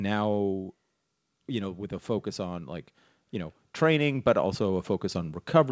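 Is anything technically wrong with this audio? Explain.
Yes, the level moves twice in this speech clip. From 0.05 to 0.9 s the opening starts loud and then sinks by about 4 dB, the background dropping along with the talker, settling just before "you know with a". That is automatic gain falling: the gain control judged the input too hot and eased its gain down over that stretch, so the whole signal, not only the voice, gets quieter.

Later, after "a focus on like", from 3.31 to 4.95 s, voice and background swell together by about 6 dB over roughly a second and a half. This is automatic gain rising: the control decided the input had become too quiet and raised its gain step by step. Because it scales everything it receives, the room noise climbs in lockstep with the speech. Throughout, nothing is heard above 8 kHz, consistent with the wideband call codec the audio passed through.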